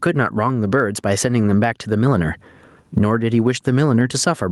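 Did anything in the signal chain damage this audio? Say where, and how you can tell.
Yes. Gain pumping runs through the whole speech clip. The level swings by about 20 dB. Loud and quiet passages sit unnaturally close together, so the result sounds squashed. The likely cause is input gain set far too high, with a fast limiter in the capture or call-processing stage clamping each peak. A noise gate would silence the gaps instead of raising them, which tells the two apart.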